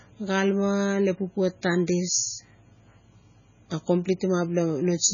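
Throughout, the speech has nothing above 7.1 kHz and sounds watery and swirling, with metallic chirps on s sounds: heavy MP3 compression, likely at a very low bitrate near 16 kbps. Unlike a plain low-pass filter, weak detail flickers in and out between frames.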